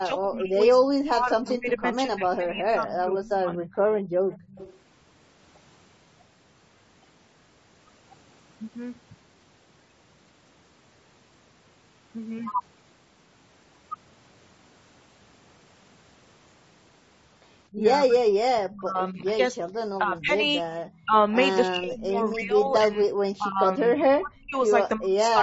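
Throughout the recording the speech carries the rough, grainy texture of low-delay AAC compression, likely AAC-ELD at a bitrate that sounds near 32 kbps. Its short transform frames resolve pitch harmonics poorly, so noise fills the gaps between them and the upper band sounds thin and synthetic. The damage is plainly audible. The call microphone processing leaves nothing above 8 kHz, which is the expected band limit.

From 0.0 to 3.7 s the talker's level sinks and breaks up, likely speech suppressed in double talk. With both sides talking at once, the echo canceller could not tell this talker apart from loudspeaker echo and attenuated both. The dips reach around 30 dB and add up to about three seconds. The same thing happens again from 17.72 s to the end, covering roughly four seconds in total.

From 3.73 to 4.79 s a faint delayed copy of the voice trails about 280 ms behind, some 25 dB under the speech. 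This is likely an echo leak: the far end's canceller left part of its loudspeaker pickup in the signal and sent it back. Short scraps recur at 18.57–18.69 s and at 20.91–21.02 s, both 305 ms late. The first of these sits about 25 dB down and the second roughly 40 dB down.

From 4.02 to 4.22 s the room tone briefly falls away by about 15 dB, for roughly 150 ms in all. This is background gated by the echo canceller, which clamped the microphone hard while the loudspeaker was active and then released it.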